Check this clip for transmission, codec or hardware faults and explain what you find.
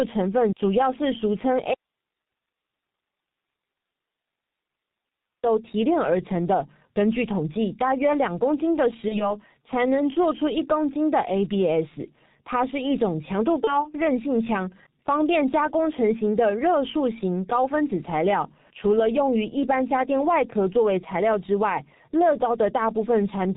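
Three kinds of fault are audible in this speech recording: heavy low-rate codec coding throughout, one long dropout to a faint residue, and two short packet-loss concealment events.

G.723.1 codec damage runs through the whole recording. The bandwidth stops near 4 kHz, and the sound is muffled and hoarse, with smeared consonants. That fits G.723.1 at a rate around 6 kbit/s. It codes 30 ms frames from a slowly updated voice model, so fast spectral detail is averaged away and sibilants and plosives lose their edges. The damage here is heavy.

From 1.74 s to 5.43 s there is an audio dropout to a faint residue lasting about 3.7 s. The speech cuts off abruptly, and the gap holds only hiss, far below the normal level at roughly 50 dB down. Then the signal returns just as suddenly. The likely cause is a loss of the wanted signal upstream while the rest of the path stayed live, so its noise floor carries on through the break.

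VoIP packet loss concealed by the speech codec occurs at 9.08 s to 9.33 s and again at 13.64 s to 13.91 s. Each event is consistent with a single lost 30 ms frame. The decoder filled the hole by extending its last pitch and filter settings at falling gain, which gives a brief buzzy, coloured smear. Because each frame's state feeds the next, the speech stays weak and distorted for roughly a quarter of a second in both places.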